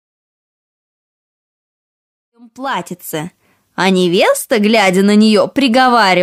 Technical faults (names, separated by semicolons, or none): none